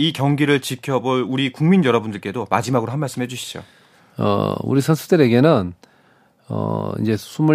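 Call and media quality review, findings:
No audible faults found in this speech recording.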